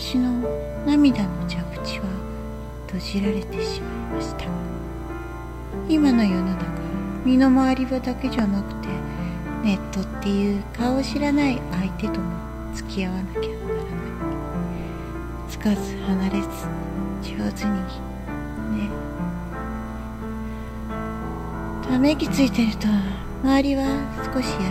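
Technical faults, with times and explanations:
Throughout, USB whine. A steady tone sits at 1 kHz, strongest at that pitch, roughly 30 dB below the main signal. The bus draws current in 1 ms frames. That periodic load leaks through the power or ground path into the audio as a fixed-pitch whine.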